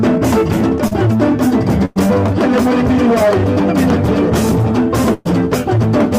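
A network-delivered audio clip has packet-loss damage in three places. At 0.87 to 0.93 s, short concealed packet loss leaves a brief smear where about 40 ms never arrived and the receiver spent 37 ms extending the preceding sound before blending back. On a spectrogram this shows as a short stretch of smoothed, repeated texture, and on the waveform as a slightly too-regular patch. Two bursts of packet loss follow, at 1.85 to 1.98 s (about 100 ms missing, 104 ms filled) and at 5.14 to 5.27 s (about 120 ms missing, 116 ms filled). Each time the decoder stretches the last sound into a fading hold with no true silence, then jumps ahead. The spectrogram shows frozen, decaying bands, and the waveform shows an envelope tapering before the abrupt resumption.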